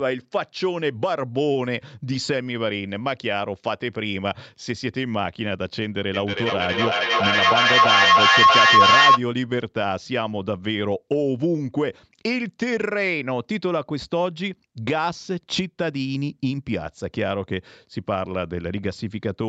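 Feedback howl, 6.14 to 9.22 s: a loudspeaker-microphone loop gains each pass, building a tone near 1 kHz that peaks about 11 dB above the speech.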